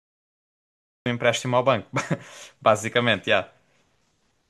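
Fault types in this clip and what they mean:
Cut-off start: capture began late; the waveform is a flat line of digital silence until 1.06 s, then speech jumps in mid-sound, a hard vertical edge on the spectrogram.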